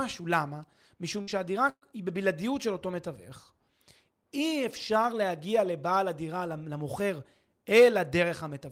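At 1.21 to 1.30 s, a burst of packet loss removes about 60 ms of speech. The receiver stretches the last sound briefly and fades it out. At 1.69 to 1.85 s, about 120 ms is lost. The fill fades, then drops to silence before speech resumes.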